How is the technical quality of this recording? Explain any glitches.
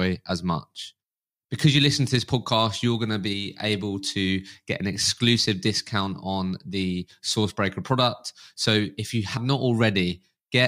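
The recording has one glitch, near the end of the speech. At 9.36 to 9.38 s there is a brief burst of damaged data in the compressed stream, lasting about 20 ms. Part of the encoded data at that point is wrong, so the decoder misreads the affected frame, loses sync and has to search for the next valid frame header before playback resumes. The result is a short chirp, squawk, click or hole that interrupts the speech.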